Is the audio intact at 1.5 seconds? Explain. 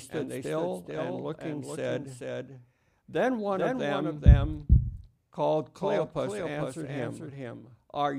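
No. Likely a second, slower capture path doubles the audio track throughout: a dry copy, about 5 dB quieter, trails roughly 400 ms behind.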